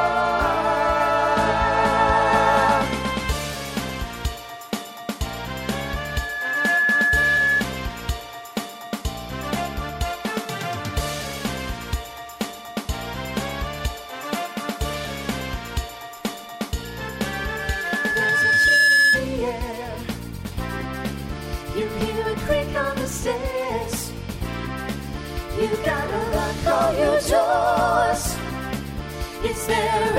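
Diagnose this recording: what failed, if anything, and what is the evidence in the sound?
The failure is loudspeaker feedback squeal, in the analogue acoustic loop between playback and microphone. A steady 1.7 kHz tone swells up from 5.63 to 7.64 s, building over about a second to roughly 5 dB above the sound. It returns from 16.83 to 19.26 s. This time it builds over about two seconds and ends near 10 dB above the sound. The microphone is picking up its own loudspeaker. At 1.7 kHz the loop gain exceeds one, so that frequency grows by itself.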